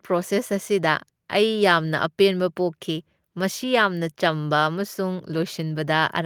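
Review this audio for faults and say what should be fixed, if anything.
Nothing stood out on listening to this speech recording, so there is nothing to flag or fix.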